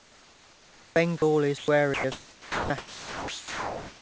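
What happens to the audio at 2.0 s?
From 1.94 to 2.04 s, about 100 ms of speech is missing. Steady comfort noise fills the gap, then the speech returns. This is likely sound dropped by the voice detector. The sender treated the speech as background and briefly stopped transmitting.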